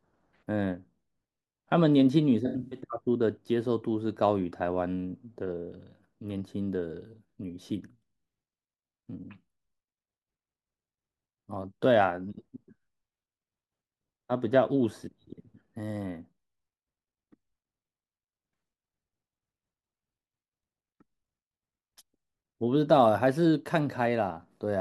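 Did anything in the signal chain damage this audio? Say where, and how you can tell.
Yes, AAC frame loss with concealment at the codec stage, 2.46 to 2.80 s: gaps refilled from the previous spectrum sound smeared and phasey, not silent like a dropout.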